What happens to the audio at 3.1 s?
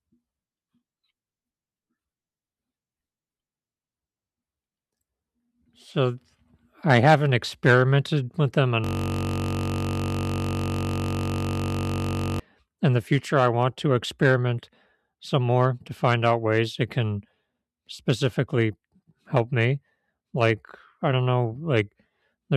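Nothing goes wrong at 3.1 s: the speech runs on without any dropout, click, distortion or other fault there.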